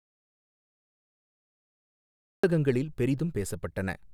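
From the very start to about 2.44 s the clip is dead silent: an audio dropout to silence already in progress when the recording begins. The speech then enters abruptly, mid-flow, with no room tone before it. The input was likely lost, through a disconnected device, a broken link or a mute, while zeros kept being written. On a waveform the first 2.44 s are a flat line; a spectrogram shows pure black until the speech begins.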